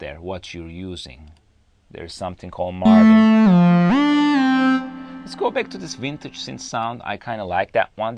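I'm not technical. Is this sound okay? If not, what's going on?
Yes, nothing wrong here.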